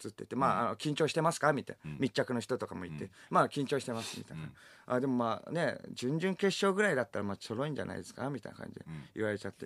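No technical faults are audible.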